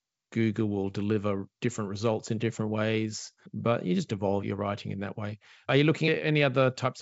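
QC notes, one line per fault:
Nothing stood out on listening to this speech, which has the band-limited sound of G.722 wideband telephone coding.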